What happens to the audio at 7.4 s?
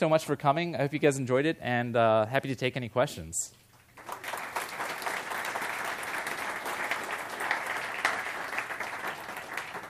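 Nothing goes wrong at 7.4 s; the audio plays through that moment intact, with no audible fault.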